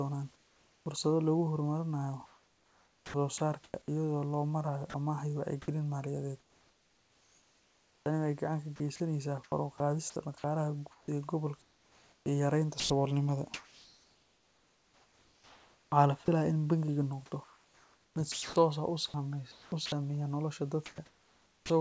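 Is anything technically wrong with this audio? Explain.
Yes. The clip is speech over a call path whose audio stops at 8 kHz, consistent with a wideband G.722 codec at 64 kbps. Three voice-detection faults affect it.

Comfort noise in place of the background occurs at 0.36 to 0.86 s and again at 20.86 to 21.70 s. In both stretches the room noise, which sits about 36 dB below the speech, turns into a flat, featureless hiss for half a second and then for about three quarters of a second. The first time it is also about 4 dB quieter. The likely cause is discontinuous transmission: the sender's detector judged these gaps silent and stopped sending, and the receiver synthesised noise shaped roughly like the background to fill them.

Sound chopped by the voice detector occurs at 2.26 to 3.88 s, at 4.90 to 16.28 s (starting right after "loo marayo"), and at 17.44 to 19.92 s. The speech turns choppy, with soft syllables and word edges dropping out. 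In total about 1.0 s, 5.3 s and 1.3 s of audio are replaced. The detector is likely toggling repeatedly between sending and muting on quieter passages, with comfort noise filling each muted moment.

Onset clipped by the voice detector occurs at 21.61 to 21.70 s. The final utterance begins abruptly, with its first 90 ms missing, so it bursts in out of the comfort noise rather than rising naturally. The detector was likely slow to register that speech had resumed, so the opening was never transmitted and synthetic noise played in its place.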